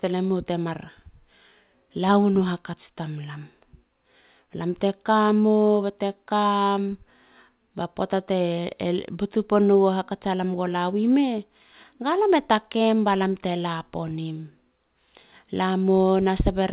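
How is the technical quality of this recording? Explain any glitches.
No glitches or faults heard.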